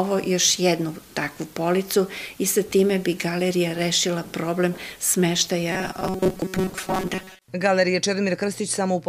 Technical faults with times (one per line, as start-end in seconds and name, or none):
5.72-7.45 robotic sound from repeated short buffers